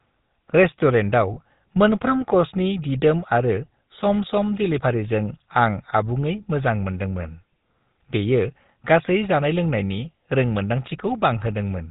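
Throughout, the audio has passed through the GSM full-rate codec, which fits a 13 kbps link. It rebuilds speech from pulse-excited vocal-tract models and drops everything above 4 kHz, leaving a plainly audible buzzy, gravelly roughness. From 1.34 to 1.38 s, lost GSM frames were filled by repeating the last good frame, which fits a single dropped 20 ms frame. This produces a brief rough, metallic ring in place of the speech.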